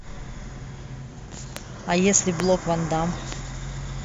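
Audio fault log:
1.57 s, 2.40 s, 3.32 s: loud pop. A sudden voltage pulse, likely from a switch, static discharge or driver glitch, enters the signal path, giving three single sharp pops, the first two roughly 20 dB above the speech and the last around 15 dB, with speech continuing underneath.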